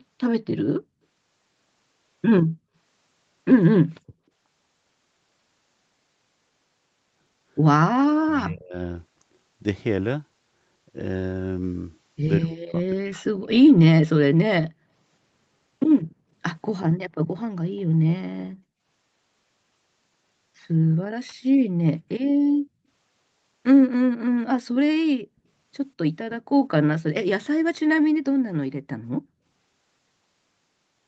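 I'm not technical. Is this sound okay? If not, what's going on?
No. Echo leak, from 0.00 to 0.04 s: a very faint copy of the speech comes back about a fifth of a second late. This is likely because the far end plays the call on a loudspeaker, and its echo canceller let a scrap of that sound slip back into the microphone.

Speech suppressed in double talk, from 8.0 to 8.75 s and from 12.41 to 14.04 s: the speech drops to almost nothing in patches. Both people were likely talking at once, so the echo canceller couldn't separate the talker from the returning echo and turned everything down.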